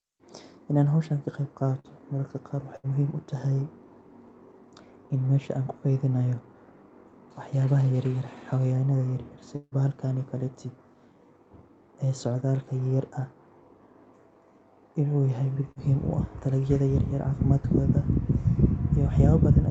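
A speech recording with network faults. At 1.79 to 1.87 s and again at 2.76 to 2.86 s the last sound is briefly held and fades before speech resumes slightly further on. This is burst of packet loss: the receiver stretched the last audio for about 47 ms and then 74 ms to cover runs of lost packets, and roughly 40 ms and 80 ms of speech never arrive. From 9.55 to 9.74 s a longer fading continuation of the last sound of about 160 ms drops into about 30 ms of silence, and speech returns with about 160 ms gone. The likely cause is a long network dropout that the concealment could only partly hide. At 15.71 to 15.79 s a short smeared wobble of about 44 ms marks short concealed packet loss, where roughly 40 ms was lost and the gap was synthesised from the preceding sound and blended back in.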